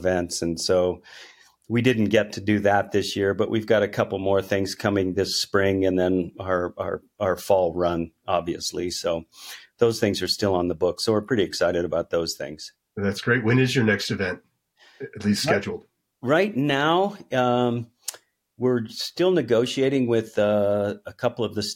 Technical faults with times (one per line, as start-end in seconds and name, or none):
none